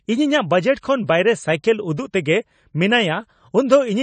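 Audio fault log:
Throughout: AAC compression, likely at about 32 kbps; nothing above 9 kHz, so speech sounds dull and smeared, a hard flat ceiling on the spectrogram.
0.81–0.83 s: pre-echo, a 25 ms hiss ahead of an attack as block-wide quantisation noise leaks forward; fuzz precedes the waveform onset, softening it.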